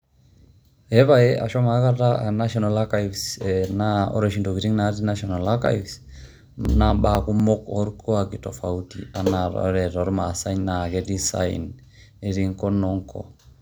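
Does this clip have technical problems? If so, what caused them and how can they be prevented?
Yes. Periodic USB or driver dropouts run from 5.66 to 7.40 s, heard as small ticks repeating every 0.248 s, about seven in all. Each time, something blocked the USB bus or the audio driver long enough for a couple of milliseconds of speech to be skipped outright rather than padded with silence, so the waveform jumps and clicks at each gap. The evenly spaced rhythm points to a background task waking on a fixed timer. To prevent this, find and disable the periodic background process or polling device sharing that USB controller, update the audio driver, or enlarge the audio buffer so brief stalls are absorbed.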